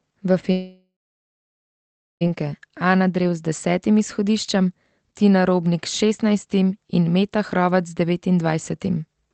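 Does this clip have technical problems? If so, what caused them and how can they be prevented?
Yes. From 0.51 s to 2.23 s there is a long network dropout, likely caused by a stretch of lost packets. About 1.7 s of audio never arrives. The receiver extends the last sound as a fading buzz, and roughly 1.28 s of that is plain silence. The sound then resumes with the missing part skipped. A short packet-loss glitch would be only a brief smear, and a natural pause would not begin with that decaying buzz. The call path itself carries ordinary coding noise, with the top end stopping near 8 kHz, which fits Opus at around 20 kbps. A steadier network link, or redundancy such as forward error correction, would help prevent this.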